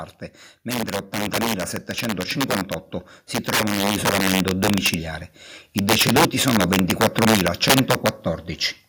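Integer overflow runs through the whole speech clip. Loud peaks overshoot the integer limit by about 11 dB and wrap to the opposite sign instead of being limited, producing sharp cracks. Around 2 percent of samples flip, seen as vertical spikes jumping across the waveform.

Automatic gain rising occurs from 3.62 to 4.97 s. The gain control judges the input too quiet and lifts its gain by about 5 dB, so voice and background swell together. The waveform envelope and spectrogram brightness climb gradually.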